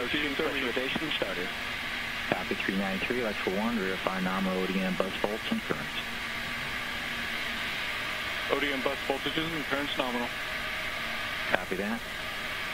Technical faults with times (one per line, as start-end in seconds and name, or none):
none